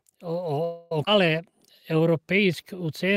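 In this speech recording, packets were likely held up on the network path and the jitter buffer ran dry, producing a call audio freeze from 0.64 to 0.92 s: the last sound is carried on as a fading buzz or hiss for about 266 ms, then the speech resumes where it stopped with nothing lost. At 1.06 s a skip ahead occurs as a stretch of audio is dropped, so roughly 150 ms of speech vanishes and the two sides are spliced almost directly together. From 1.09 to 2.77 s a jitter buffer slow-down follows as the receiver rebuilds its reserve by repeating pitch periods, adding 127 ms and slowing the speech to 93% of normal speed without changing pitch.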